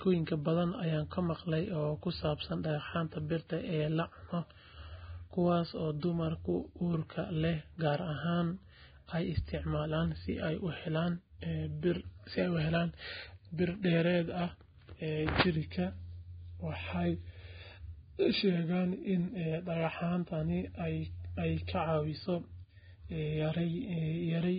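Right through, the speech sounds dull and grainy, with nothing above 4.9 kHz and smeared onsets, likely heavy Vorbis compression at a rate that fits about 16 kbps.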